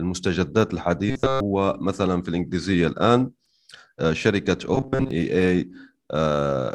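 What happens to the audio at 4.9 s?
From 4.75 to 5.11 s, new audio likely arrived too late, so a buffer of about 7.5 ms was replayed in place of most of the real signal. This robotic sound from repeated short buffers imposes a rigid, metallic 133 Hz buzz on the speech.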